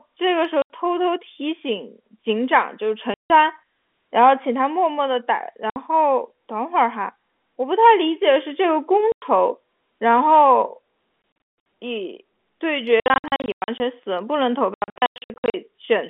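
Packet loss filled with silence breaks up this speech recording: the receiver inserted digital silence for missing 20 ms packets, leaving hard-edged holes at 0.62, 3.14, 5.7 and 9.12 s, then heavier scattered dropouts across 11.22–11.66, 13.0–13.8 and 14.74–15.54 s, over the narrow telephone band.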